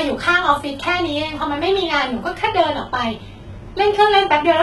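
The speech was likely squeezed through heavy HE-AAC compression at a rate that sounds like 16 kbps, with the treble rebuilt by band replication rather than coded. Throughout, nothing sounds above 11.8 kHz, and s sounds come out gritty, metallic or lispy.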